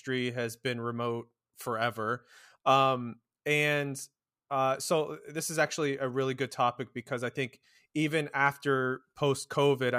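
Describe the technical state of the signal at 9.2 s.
At 9.2 s the speech signal is intact, with no audible technical fault at that moment.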